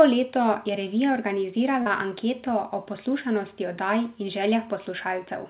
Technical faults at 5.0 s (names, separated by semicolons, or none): none